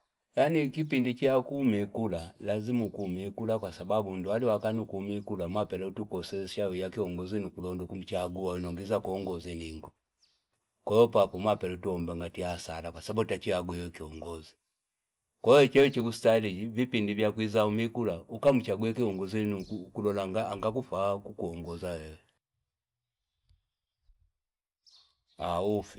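The resampler restarted on every block, throughout. Each 50 ms block was upsampled from 24 kHz to 48 kHz alone. Edges tick at 20 Hz.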